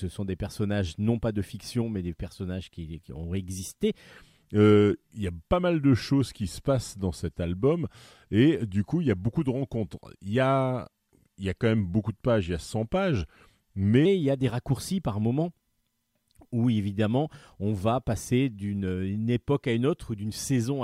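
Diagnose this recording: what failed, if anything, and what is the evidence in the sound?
A section at the wrong speed runs from 4.17 s to 14.06 s. Across that stretch the speech slows to about 0.89 times its original rate and drops roughly two semitones, with tempo and pitch shifting together and then snapping back at 14.06 s. That coupling points to a clock or sample-rate mismatch rather than time-stretching, most likely at the playback or editing stage, where this segment was read against the wrong rate.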